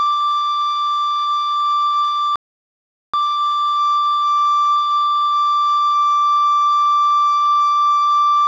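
A rebuffering stall interrupts this music clip from 2.36 s to 3.14 s: the sound drops abruptly to silence and then picks up again at exactly the point where it stopped. The player has run out of downloaded audio and waits for more data before continuing. No material is skipped, but the pause adds 778 ms to the running time, so everything after 2.36 s arrives late.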